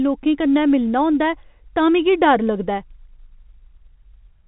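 The speech carries the narrow telephone-band sound of G.711 mu-law coding at 64 kbps, with nothing above 4 kHz and at most a faint level-following quantisation noise beneath it, and no technical faults can be heard.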